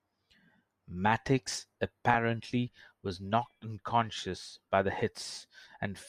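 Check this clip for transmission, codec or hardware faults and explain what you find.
The speech has two short dropouts from lost LE Audio frames.

The first comes at 2.14 s. About 10 ms of audio is missing, which fits one lost frame. The second runs from 5.35 to 5.37 s, just after "knocked unconscious by the". About 20 ms is missing, which points to two frames. At each gap, the LC3 decoder fills in the missing frame by repeating the last good spectrum with random signs. The result is a brief noisy smear in place of clean speech, with the second one slightly longer. The light lossy compression leaves only faint codec traces.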